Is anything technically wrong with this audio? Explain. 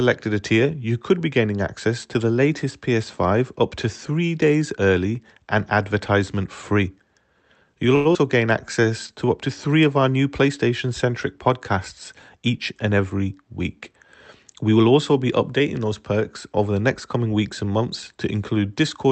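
Yes. Four jitter buffer faults cluster in the middle of this speech clip. The audio comes through a call codec path, and the top end stops around 8 kHz, which fits Opus at a wideband setting.

From 7.95 to 8.07 s there is a short stall from a late packet. A packet arrived late and the jitter buffer ran dry. The receiver held the last sound for about 98 ms until the packet showed up. It then carried on from the same point. Nothing is lost. You hear one sound dragged out with a faint buzz or dip. Playback now runs 98 ms later.

Right after, from 8.13 to 8.17 s, there is a skip ahead. Roughly 70 ms of audio was dropped while later audio was already queued. That took back most of the delay from the stall. Only about 16 ms of filler bridges the gap. The speech lurches forward, and a fragment of sound goes missing. The two sides of the jump are stitched almost directly together.

From 8.61 to 9.26 s, ending just before "up to three of", there is a jitter buffer slow-down. 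The buffer was low or had just raised its target delay, so the receiver repeated pitch periods over and over. This added 72 ms in total. Speech plays at about 90% speed with no change in pitch. Sounds feel stretched.

From 12.21 to 13.11 s, just after "centric podcasts", there is a jitter buffer speed-up. The buffer held too much audio. The receiver trimmed short pitch-period slices, about a tenth of a second in all. The pace jumps to about 111% at the same pitch, and the speech sounds rushed.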